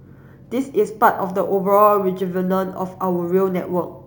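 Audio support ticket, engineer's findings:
Imaging from sample-and-hold upsampling, throughout. Metallic fizz over the speech, tracking its level; mirrored band 8 to 16 kHz at about -23 dB re signal. Points to a 16 kHz source raised to 48 kHz by sample repetition, no anti-imaging filter.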